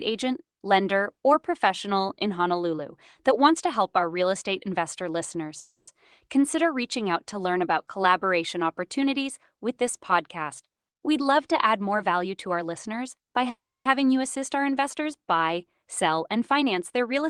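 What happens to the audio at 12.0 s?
At 12.0 s the speech is inside a jitter buffer speed-up running from 10.63 to 12.27 s. The receiver trims pitch-period slices, roughly 150 ms in total, so the speech plays about 8% faster at unchanged pitch and sounds hurried. A spectrogram shows harmonics at the same spacing but syllables compressed in time, and the waveform shows slightly shortened periodic stretches.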